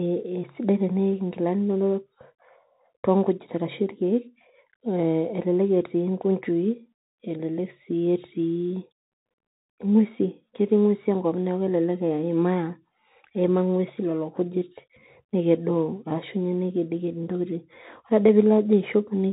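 A speech recording carrying Bluetooth CVSD headset codec damage from start to finish, and it is plainly audible. The one-bit delta coder, whose coarse grain fits a 64 kbps link, chases the waveform in adaptive up-or-down steps. Sharp loud peaks outrun it and smear, sibilants come out scratchy, and a granular hiss sits under everything. On a spectrogram all energy stops dead at 3.8 kHz. The waveform shows slope-limited, staircase-like edges on transients.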